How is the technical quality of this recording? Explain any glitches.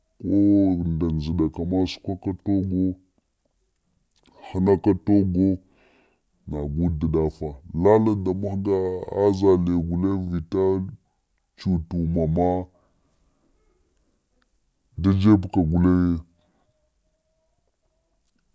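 The whole clip has a wrong sample rate. The samples play back at two-thirds of their intended rate with no conversion, which fits 24 kHz audio played at 16 kHz. The speech therefore runs at 0.67 times normal speed and sits about 7 semitones low, sounding slow, deep and dragged.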